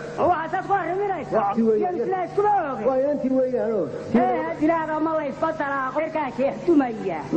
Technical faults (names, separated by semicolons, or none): compressed frames skipped